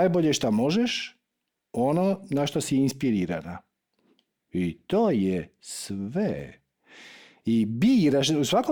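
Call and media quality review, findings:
No audible faults in the speech; no dropouts, level problems or timing irregularities found to attribute to any component.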